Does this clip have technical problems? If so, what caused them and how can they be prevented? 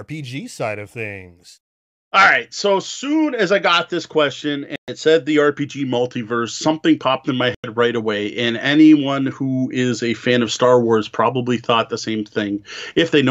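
Yes. The sound cuts to silence from 4.76 to 4.90 s and from 7.55 to 7.68 s, then resumes further on. This is likely a Bluetooth dropout: late wireless packets were discarded. Keeping the headphones close to the source and away from interference prevents this.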